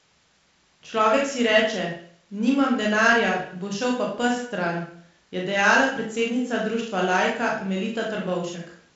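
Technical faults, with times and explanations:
No faults turn up in this speech clip; what you hear is ordinary G.722 wideband telephone coding, with nothing much above about 7.7 kHz, a light hiss in the upper band, and a somewhat noisier lower band that fits the 48 kbit/s mode.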